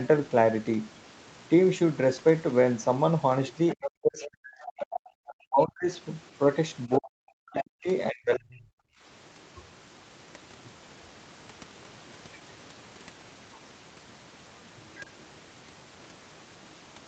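From 3.68 to 5.33 s the other side's voice leaks through: a second talker sits faintly underneath, roughly 15 dB below the main speech. That points to the far end likely playing on a loudspeaker and the echo canceller not scrubbing all of it out of the mic. The leaks come back twice as short scraps, at 6.92 to 6.97 s, well down at about 25 dB under, and at 7.57 to 7.63 s, louder at only about 10 dB under.

Overlapping that, the near talker's speech gets suppressed in double talk, from 3.74 to 4.91 s, again from 5.46 to 5.91 s, and from 6.87 to 8.76 s. While both sides are talking, the canceller likely can't tell its own talker from the echo and ducks everything, so the voice drops out in chunks, by as much as 40 dB at the deepest. That adds up to about a second in the first stretch, under half a second in the second, and about one and a half seconds in the last.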